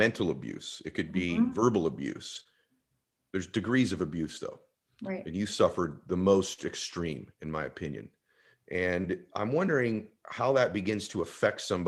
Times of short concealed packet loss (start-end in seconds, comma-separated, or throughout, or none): 2.43-2.47, 9.02-9.06